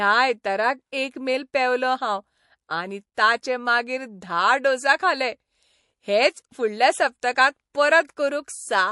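Speech, and the codec damage is plainly audible the whole way through: a watery, swirly quality where quieter detail flickers in and out, which is most likely MP3 compression at a low rate, something in the region of 48 kbps. At that budget the encoder can't cover all its frequency lines, so weak ones get dropped and reappear from frame to frame, and that churn is the swirl you hear. There's also a pre-echo from 3.14 to 3.17 s: a hiss about 20 dB up leads into a sharp attack by roughly 29 ms and softens its edge. The quantisation noise meant for the loud onset got spread back across the quiet stretch before it, and the smear fits a long transform block of around 48 ms with no switch to short blocks.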